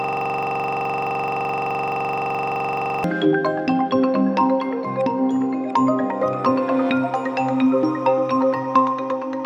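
A system hang loop, already under way at the start, keeps replaying one 42.67 ms buffer, which fits 2048 samples, giving a rough 23.4 Hz buzz until 3.04 s.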